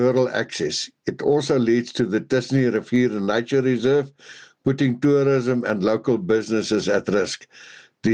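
Gain pumping runs throughout: the gain swings by roughly 15 dB, pulled down under each loud sound, likely from excessive input gain driving a fast limiter.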